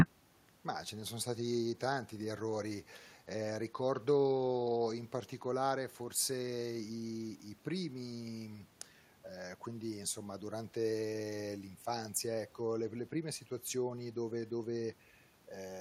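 From start to finish, the speech carries an echo with no canceller. A faint copy of each phrase returns around 400 ms later. The far end seems to play the call through a loudspeaker. Its microphone picks that sound up and sends it back across the network, and nothing strips it out. The returning copy sits about 37 dB below the direct speech. It is quiet, sounding thin.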